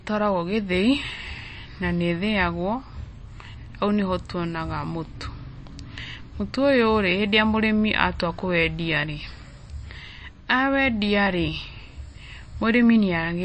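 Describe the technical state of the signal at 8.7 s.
At 8.7 s the speech sounds watery and swirly, with nothing above 8.3 kHz and sibilants turned metallic. This runs through the whole clip and is likely MP3 compression at a very low bitrate, near 33 kbps, cutting treble and toggling weak frequency lines between frames.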